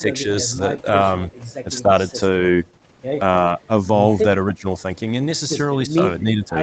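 The speech dips briefly at 0.01, 0.43, 1.83, 4.51, 5.87 and 6.23 s, each for well under half a second, sinking roughly 5 to 15 dB. That's likely speech suppressed in double talk, with the echo canceller ducking the near talker while the far side spoke.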